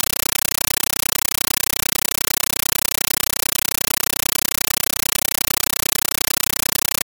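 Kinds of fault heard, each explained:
Compressed stream played as audio: Instead of being decoded, a Dolby Digital bitstream has been passed through as if it were ordinary PCM samples, and it fills the whole clip. What comes out is very loud, harsh static chattering at 31.25 Hz. Each burst of noise lasts 9.33 ms, followed by near-silent zero padding for the rest of each 32 ms period. The burst length and padding fit a 448 kbps AC-3 stream.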